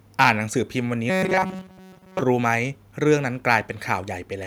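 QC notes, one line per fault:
0.21–0.30 s and 3.52–3.55 s, microphone overload: a harsh, crackly edge on the loudest peaks, which push about 4 dB and then about 2 dB past the converter's limit. A small share of samples have their tops sheared flat, likely from input gain set too high.
1.10–2.21 s, robotic sound from repeated short buffers: the speech turns into a stiff metallic buzz at 188 Hz that still tracks the words loosely. Most of this stretch is likely a repeated slice of about 5.3 ms, with the real audio skipped.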